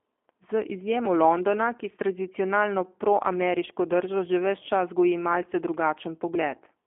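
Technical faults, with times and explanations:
Throughout, G.729 codec: the speech has been carried over a narrowband telephone-style path, with a line band of 250 Hz to 3.4 kHz and no content above 3.5 kHz, so it sounds boxed-in and dull. The damage is plainly audible as a rough, slightly synthetic texture, which fits the 8 kbit/s G.729A variant. The codec rebuilds the speech from a compact vocal tract model, a pitch predictor and a few pulses per frame rather than from the original waveform.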